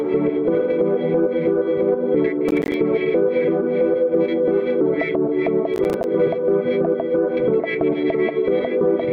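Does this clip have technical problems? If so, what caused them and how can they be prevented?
Yes. The music breaks into gritty crackle from 2.49 to 2.74 s and again from 5.74 to 6.04 s. This is processor overload crackle: the processor keeps missing deadlines for buffers of about 10 ms, and each miss drops a hard-edged sliver of silence. Reducing processing load or enlarging the buffer prevents it.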